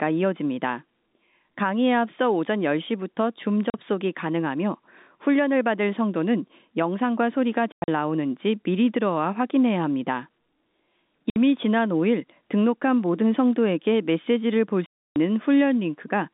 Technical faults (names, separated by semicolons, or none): packet loss filled with silence